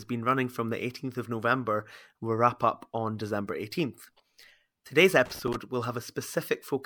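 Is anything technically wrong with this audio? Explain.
Yes. From about 5.26 to 5.56 s the speech is broken by an irregular burst of crackle and scratching, roughly three-tenths of a second of ragged, uneven interruption. This is loose connector crackle: a worn or dirty contact somewhere in the cable or jack is making and breaking rapidly as it shifts. Each break chops the signal, and any DC present on the line turns the reconnections into pops, giving the scratchy, stuttering texture.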